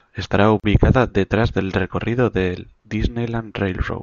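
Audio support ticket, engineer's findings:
Brief dropout in the speech at 0.60–0.64 s, about 38 ms of silence with smeared edges, just before "detrás del recorrido del". Gap at a join of encoded pieces: untrimmed encoder start delay and last-frame padding left at a segment boundary.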